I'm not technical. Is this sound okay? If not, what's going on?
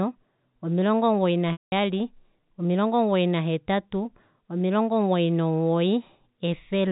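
No. Just after "omilongo omugoyi", at 1.52 s, the sound drops out for about 0.2 s, until 1.72 s. This is packet loss with pitch repetition. Some of the sound went missing on its way across the network. To cover the hole, the receiver kept replaying the last tiny bit of the voice. That gives a brief held, buzzy tone. The gap is long enough that the tone fades to silence before the speech returns.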